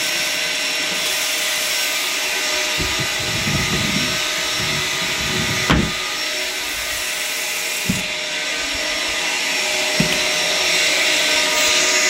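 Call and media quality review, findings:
No audible faults found.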